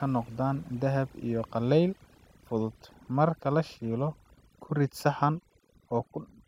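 Throughout, the background drops to near-silent gaps flecked with twinkling specks: overdone noise removal, with bands near the noise estimate cut away along with quieter voice detail.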